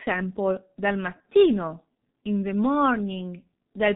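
It's a speech clip run through a G.723.1 codec the whole way, and heavily. Nothing gets through above about 3.8 kHz, so it's muffled, and the slow-updating voice model leaves it hoarse with smeared consonants, which fits a rate around 6 kbit/s.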